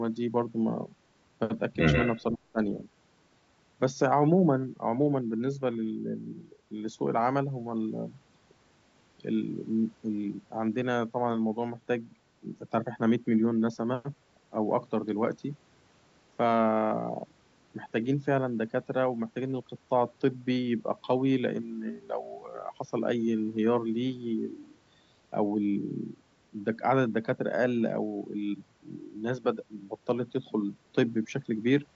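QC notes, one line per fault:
1.93–2.22 s, echo leak: the far end's echo canceller likely left part of its loudspeaker pickup uncancelled and sent it back, so a faint copy of the speech trails it by about 132 ms, roughly 10 dB below the direct sound, as a brief double.
2.3–2.6 s, speech suppressed in double talk: with both sides talking, the echo canceller likely could not tell the talker from the loudspeaker echo and pulled both down. The speech dips by as much as roughly 20 dB across about a fifth of a second.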